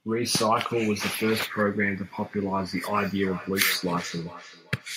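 Two nearby devices loop each other's playback, so feedback echo between two devices from 2.79 s repeats the speech roughly every 0.4 s, ringing, about 15 dB down.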